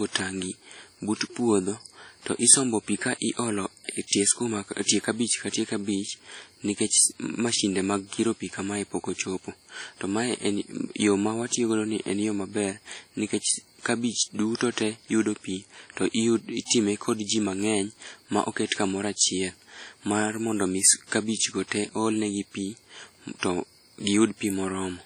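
Throughout the speech, every sound carries a ringing, washy smear, with a hiss that swells and fades along with it. This is likely WMA compression. The heavy damage fits a bitrate around 32 kbps, where long transform blocks spread quantisation noise across tens of milliseconds.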